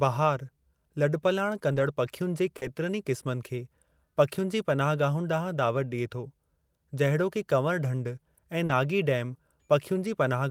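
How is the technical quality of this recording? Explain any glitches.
The speech has three brief network-loss glitches, grouped into two kinds.

Lost packets rebuilt from error correction, at 1.71–1.85 s, 2.61–2.63 s and 8.69–8.71 s: later packets carried low-bitrate backup copies, which the decoder played instead of leaving gaps. The longest stretch, 80 ms, fits about four packets. These spots sound rougher and noisier than the surrounding speech.

Short concealed packet loss, at 2.57–2.63 s and 8.65–8.71 s: each time, 40 ms of audio arrived too late, so the receiver extended the preceding sound to fill the hole before the rebuilt copy took over. This produces a brief smear or wobble.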